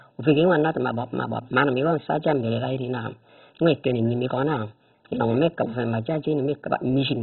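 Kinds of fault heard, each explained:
MP2 compression: speech sounds dull and gurgling, with nothing above about 4.1 kHz and granular, flickering upper bands, likely from heavy Layer II coding near 16 kbps.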